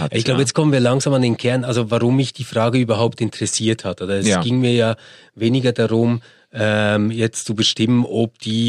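No technical faults are audible.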